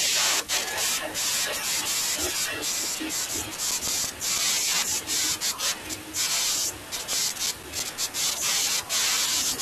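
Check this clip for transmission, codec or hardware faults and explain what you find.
The speech has CD scratch ticks in two bursts: from 3.21 to 4.38 s and from 6.80 to 8.29 s. A blemish on the disc wipes out more data than error correction can restore once per rotation, so the player interpolates or mutes those samples. The result is about seven regular ticks per second, each lasting only a few milliseconds, of uneven strength. A waveform shows evenly spaced spikes or tiny gaps, and a spectrogram shows thin vertical broadband lines.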